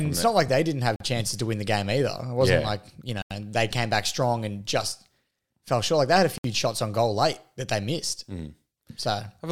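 At 0.96 s, after "like they didn't have", the speech drops into a block of digital silence for about 43 ms. The output buffer was likely not filled in time, which fits a 2048-sample buffer. At 3.22 s, after "yeah like you", a longer 85 ms hole follows, fitting a 4096-sample buffer. At 6.38 s, after "they had a", a 64 ms gap cuts in. Each sounds like an abrupt hole.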